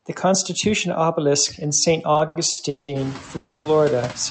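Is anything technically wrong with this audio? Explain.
Yes, there are three faults.

Noise suppressor artifacts run through the whole clip. The suppressor pulls down bands it judges to be steady noise, frame by frame, by about 11 dB, so the background dips between phrases and swells back under the speech. That pumping is what separates it from plain room noise, which stays level, although here the room noise itself gets louder around 3 s.

Repeated stalls (stutter) occur from 2.13 to 2.90 s. The receiver ran out of audio five times, the longest wait about 190 ms, and each time it stretched the last sound to fill in, about 370 ms in all, nearly half that stretch. Nothing is lost; the speech drags and hiccups. Several short catches in a row mark this as a stutter rather than a single freeze.

A call audio freeze follows from 3.36 to 3.67 s. The last sound hangs, continued for about 290 ms, then resumes exactly where it stopped, with nothing skipped and no true silence. 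The likely cause is packets held up in transit, adding about 290 ms of delay in one go. One long held sound, rather than a cluster of brief ones, distinguishes it from the stutter, and the absence of missing speech distinguishes it from a dropout. Above about 8 kHz the call codec leaves nothing, as this path normally does.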